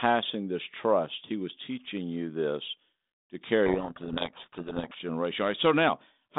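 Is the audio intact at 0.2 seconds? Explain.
Yes, the audio is intact at 0.2 seconds, with nothing there beyond the ordinary narrowband sound of the G.726 telephone link carrying it.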